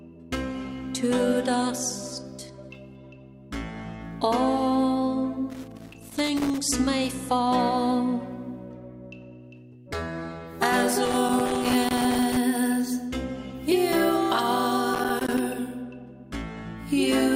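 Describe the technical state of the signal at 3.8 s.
At 3.8 s the signal is intact, with no dropout, distortion, glitch or other fault to be heard.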